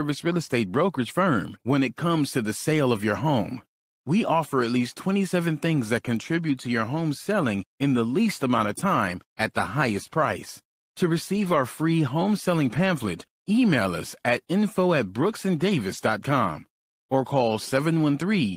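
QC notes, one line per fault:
11.35–11.57 s, 12.65–12.79 s and 15.93–15.95 s, lost packet rebuilt from error correction: three dropouts that never become silent gaps. Instead, the sound turns briefly grainy and noisier for about 0.22 s, 0.14 s and 0.02 s, which fits runs of roughly six, four and one 20 ms packets. Each missing stretch was filled from the low-bitrate backup copy carried in the following packet, so the audio continues but with coarser detail.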